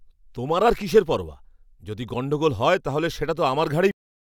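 Right at 3.91 s the speech hits a cut-off end: the final buffers never got written, so it stops mid-sound and drops straight to digital silence, no decay.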